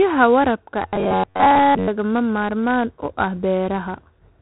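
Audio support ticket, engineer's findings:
4-bit ADPCM compression throughout: gritty hiss riding every loud syllable, rough edges on sharp onsets where step size lags. Nothing above 3.9 kHz, so dull top end too. Fits a 32 kbps stream at a low sample rate. Heavy damage.

Robotic sound from repeated short buffers, 0.88 to 1.89 s: rigid metallic buzz near 94 Hz, speech contour tracked only roughly. Likely starved playback looping ~11 ms chunks, most of the real audio skipped in that stretch.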